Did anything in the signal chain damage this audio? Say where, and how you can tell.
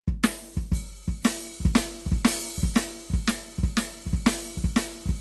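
No, nothing in the chain has hurt this music; it simply came through a call codec and jitter buffer as intended, with the top end trimmed at around 12 kHz, which fits an Opus link at about 32 kbps.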